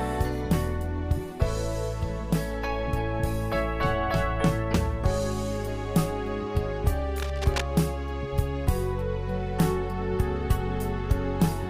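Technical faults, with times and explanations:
7.16 to 7.62 s, cable scratch noise: a dense, uneven crackle rides over the sound for about half a second, roughly 10 dB below it, likely from a worn connector being moved as its contact resistance jumped. A spectrogram shows ragged broadband streaks, and the waveform shows jagged bursts.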